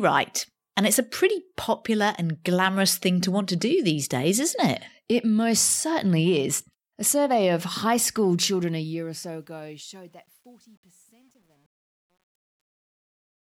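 From 8.30 s, an undithered gain stage truncating the fade-out, consistent with 10-bit resolution, causes truncation distortion on a fade: gritty from 9.53 s, worst through 13.47 s.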